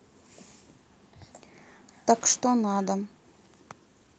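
There are no technical faults to describe in this speech, which shows only the ordinary character of an Opus call path.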